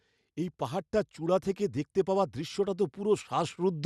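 At 2.04 s the automatic gain control judges the incoming speech too quiet and starts raising its gain, and it keeps climbing through to the end of the clip at about 3.85 s. Because the gain acts on the whole signal, the voice and the background noise swell together over that final stretch of nearly two seconds, a slow lift in level rather than a jump, heard through the call codec's top end near 12 kHz.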